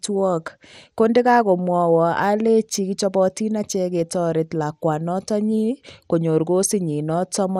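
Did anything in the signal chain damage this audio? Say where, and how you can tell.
Yes, at the codec stage: the speech sounds dull and gurgling throughout, with nothing above 15.9 kHz, likely MP2 compression starving and switching off upper sub-bands, consistent with roughly 80 kbps.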